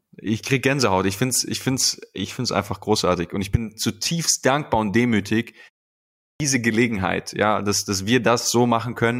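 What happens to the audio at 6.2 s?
A clipped start after a pause runs from 5.91 to 6.4 s, just after "zutiefst dankbar und demütig". During the 0.3 s pause the output device drops into sleep, and it needs about 0.49 s to wake, so the speech resumes abruptly with its opening sounds missing.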